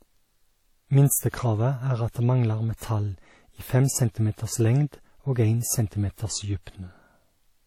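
Speech carrying plainly audible WMA compression throughout: washy, ringing smear with hiss that rises and falls with the signal rather than holding steady like background noise. Nothing is present above 19.1 kHz, and the damage fits a likely low bitrate near 48 kbps.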